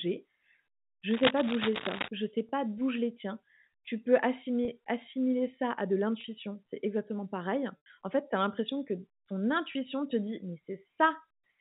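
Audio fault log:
1.10–2.09 s, cable scratch noise: For about a second, dense and irregular crackling and rustling sits on top of the speech at roughly the same loudness as the speech itself. The likely cause is a worn cable, connector or control being moved, so that its contact resistance jumps about rapidly. On a spectrogram this appears as ragged vertical streaks of broadband energy scattered across the band. On the waveform it shows as spiky, uneven bursts riding over the speech envelope.
2.49, 4.65, 6.21, 7.77–7.86 and 9.72 s, packet loss with pitch repetition: At each of these points the receiver lost audio and filled the gap by repeating the last pitch period while fading it out. The gaps at 2.49, 4.65, 6.21 and 9.72 s are each about 30 ms long, which fits a single lost packet. These sound like a brief, slightly held, buzzy catch in the voice. The gap at 7.77 s lasts about 90 ms, which fits three consecutive packets. 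That is longer than the fade, so the repeated tone dies away to near silence before the speech cross-fades back in.
On a spectrogram, each short gap shows as a few frames of perfectly steady, evenly spaced harmonics where natural speech would drift. The 90 ms gap adds a darker band after those frames. On the waveform, identical repeating cycles with a decaying envelope are visible, and at 7.77 s they shrink into a flat stretch.
The G.711 telephone coding running throughout leaves the spectrogram empty above 4 kHz.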